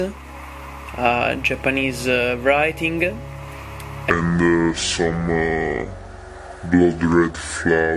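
From 4.10 s to the end of the clip, the sound abruptly drops about seven semitones (-7.02) and slows to two-thirds speed (0.667), sagging heavily and dragging. This is a wrong sample rate fault. The samples are played back more slowly than they were captured, with no rate conversion in between, so pitch and tempo fall together by the same ratio. That ratio fits 48 kHz material being played at 32 kHz.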